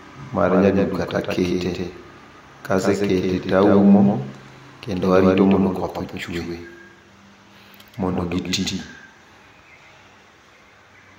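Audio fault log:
throughout, doubled audio track: speech repeats about 150 ms later, roughly 5 dB down, likely a second capture path; waveform shows every envelope echoed undecayed.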